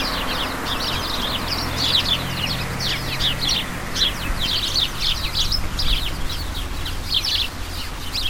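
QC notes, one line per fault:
Throughout, stuck bit: distortion across the whole clip, with noise filling the pauses, likely from one data bit held fixed, corrupting about half the samples.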